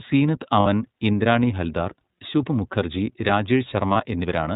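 Speech, coded throughout with the iLBC codec: narrowband, nothing above 4 kHz, audibly rough and synthetic, consistent with the 13.33 kbps, 30 ms-frame mode. Lost iLBC frames occur at 0.60 to 0.67 s, just before "ഇന്ദ്രാണി ഹൽദാർ ശുഭ് മുഖർജി", and 3.93 to 3.96 s. In both gaps the decoder repeats the last pitch cycle as a brief buzzy held vowel, fitting two frames and one frame lost, and the speech recovers immediately.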